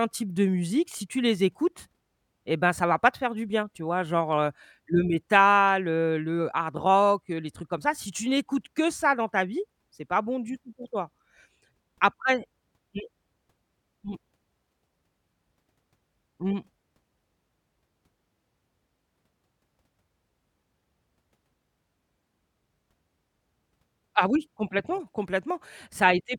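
No technical faults can be heard anywhere in the speech. There is no moment in the recording that calls for a timestamp or any correction.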